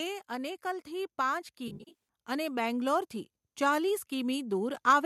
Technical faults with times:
0.28-5.01 automatic gain rising
1.68-1.99 AAC frame loss with concealment

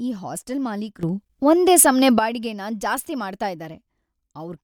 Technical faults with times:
1.03-2.19 sudden gain jump

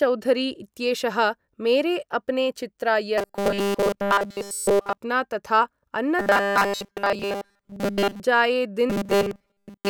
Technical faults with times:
3.18-4.97 robotic sound from repeated short buffers
6.19-8.20 robotic sound from repeated short buffers
8.90-9.89 robotic sound from repeated short buffers

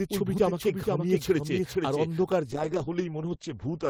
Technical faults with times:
0.00-2.32 doubled audio track
2.53-3.90 call bitrate drop

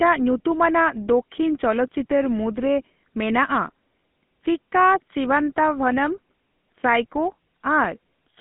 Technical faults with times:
0.00-8.40 GSM full-rate codec

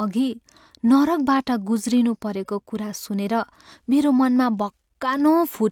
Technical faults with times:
none

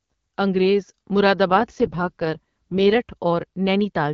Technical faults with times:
1.50-2.98 AMR rate drop

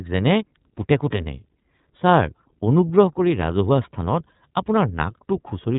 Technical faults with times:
0.00-5.79 iLBC codec

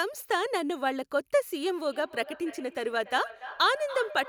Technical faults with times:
1.76-4.28 feedback echo between two devices

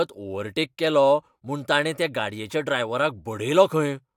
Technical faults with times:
none

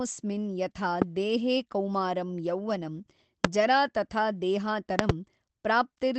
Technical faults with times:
1.02-1.04 loud pop
3.45-3.47 loud pop
4.99-5.12 loud pop

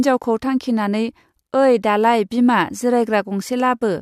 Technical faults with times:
none

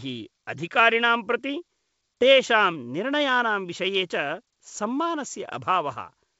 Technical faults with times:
none

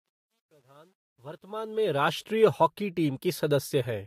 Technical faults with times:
0.00-2.11 truncation distortion on a fade

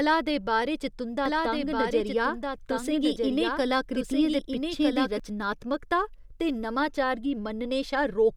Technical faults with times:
1.26-5.20 doubled audio track

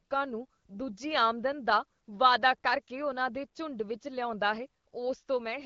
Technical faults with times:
none

